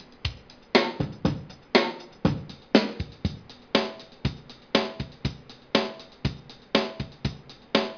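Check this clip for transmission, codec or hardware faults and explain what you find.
Nothing stood out on listening to this clip.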